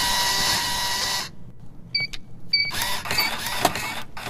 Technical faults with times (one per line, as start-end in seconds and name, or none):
0.00-4.29 doubled audio track
1.01-1.09 DAB burbling
3.15-3.36 DAB burbling